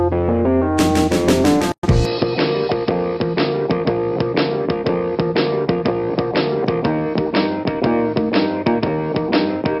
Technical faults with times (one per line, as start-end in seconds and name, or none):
1.72-1.83 gap at a join of encoded pieces
2.05-9.80 input switched to a poorer device